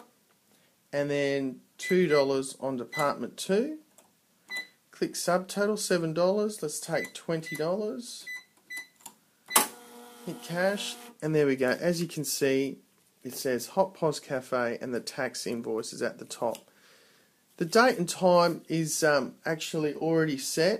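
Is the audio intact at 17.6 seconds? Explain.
Yes, the audio is intact at 17.6 seconds, with no dropout, click, distortion or other fault to be heard at that point.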